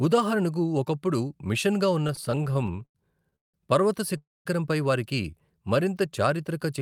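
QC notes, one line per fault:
2.07–3.56 s, repeated stalls (stutter), after "ఉదాహరణకు ఒకప్పుడు మిషన్గా ఉన్న": twenty short holds, longest 177 ms, filling nearly a third of the span; smeared repeated frames and stretched blocks on the spectrogram, audio drags without losing anything.
4.18–4.47 s, call audio freeze, before "వారికి మరింత": a 279 ms hold, most of it silent, a flat waveform gap where delivery was likely held up, then sound resumes intact.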